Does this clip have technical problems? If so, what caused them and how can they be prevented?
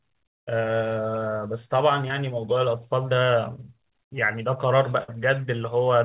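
Yes. At 2.08 to 2.11 s there is a short concealed packet loss. About 20 ms of the call arrived too late or not at all, and the receiver papered over the hole by extending the preceding sound for about 12 ms before blending back into real audio. What you hear is a brief smear or wobble in the speech. A jitter buffer with a little more headroom, or forward error correction, would prevent this.

From 5.03 to 5.15 s there is a burst of packet loss. Several consecutive packets, about 40 ms of audio, were lost. The receiver kept the last sound going for about 49 ms, fading it as the gap lengthened, so the sound turns into a dwindling buzz or hiss. It then resumes slightly further on, with about 9 ms dropped. Redundant packets or a steadier network link would prevent this.

The call codec's band limit is audible throughout, with nothing above 4 kHz, which fits G.711.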